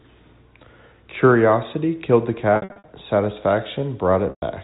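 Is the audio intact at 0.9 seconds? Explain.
Yes, the speech is intact at 0.9 seconds, with nothing there beyond the ordinary narrow, telephone-band sound of G.711 coding.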